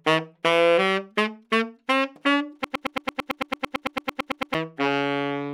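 From 2.64 s to 4.55 s the sound turns into a broken-record loop: a 0.11 s fragment repeats exactly, 17 times back to back, likely because playback stalled on its last buffer. Unlike an echo, the repeats never fade, and the audio that should have played there is lost.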